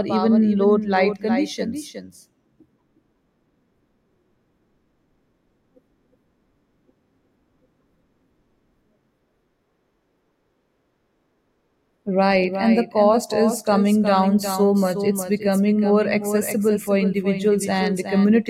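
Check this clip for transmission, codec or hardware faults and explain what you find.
There's one fault, and it runs the whole way through: a doubled audio track. Every bit of the speech comes back a second time, roughly 400 ms late and about 10 dB quieter, as a full-band copy with no decay or room colour, so it sounds like a flat, stuttering shadow rather than an echo. The likely cause is the same signal being picked up twice, once through a slower path that lags the main one.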